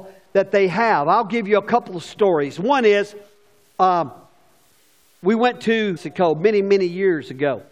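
From start to finish the speech carries a grainy, fizzy edge that follows the voice, roughest on quiet syllables and word tails, where the sound sputters rather than fading smoothly. That's low bit depth without dither. The grit sits roughly 45 dB under the signal and moves with it instead of acting as a steady hiss, which fits samples likely truncated to around 10 bits with no dither, so the rounding error stays locked to the waveform.

At 5.96 to 5.98 s the audio lurches forward with a small blip, and the speech picks up somewhere later than where it left off. That's a stream segment skipped. Most likely one chunk of the stream never arrived and the player carried on from the next one, so a piece of the programme is simply gone and the join lands abruptly mid-flow.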